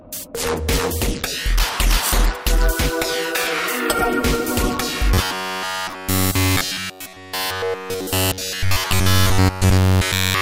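From 5.14 s to the end, playback likely starved and kept looping a short buffer, producing robotic sound from repeated short buffers: a rigid, metallic 93.8 Hz buzz.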